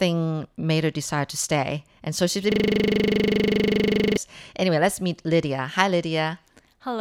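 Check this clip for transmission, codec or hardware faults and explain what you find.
One hardware fault is present: a system hang loop from 2.52 to 4.17 s, right after "so she's". The audio driver froze while the sound hardware kept replaying a single 40 ms buffer, so that identical slice repeats exactly about forty times, forming a steady 25 Hz buzz. Packet-loss concealment would fade or vary its repeats; this loop stays constant and unchanged until it cuts off.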